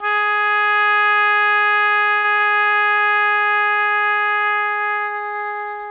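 From 2.18 to 3.02 s the call link suffers repeated packet loss, producing a robotic sound. Six gaps open where packets go missing or arrive too late, the longest gap lasting 60 ms. Each hole is bridged by stretching the preceding audio, so about a quarter of that stretch is filled-in sound. The music turns choppy and robotic, with fragments dropping out. Throughout, nothing is heard above 4 kHz, consistent with a narrowband 64 kbps G.711-style call codec.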